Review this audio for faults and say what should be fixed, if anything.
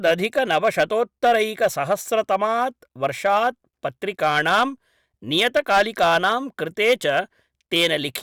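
Hard clipping runs through the whole speech clip. The signal was driven about 8 dB past what one stage could pass, so the loudest peaks, around 2 percent of the samples, are sliced flat. Those flat tops generate harmonics well above the original spectrum, heard as crackle on the peaks. Fixing it means re-recording or re-exporting from an unclipped source. To prevent it, lower the gain ahead of the overloading stage so peaks keep several decibels of headroom.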